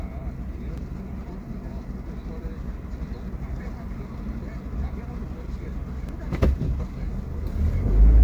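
At 0.77 s a block of digital silence about 2 ms long drops the sound to zero and back with no fade. It is heard as a sharp tick, a flat line on the waveform and a thin full-height vertical stripe on the spectrogram. At 3.65 s compressed frames are skipped: the decoder jumps ahead by about 150 ms, which fits several frames of 23.2 ms. The overlapping frames smear the join into a brief blip. On the spectrogram this shows as a soft discontinuity rather than a hard edge. The same 2 ms dropout returns at 6.09 s, and a second skip of about 150 ms follows at 6.30 s.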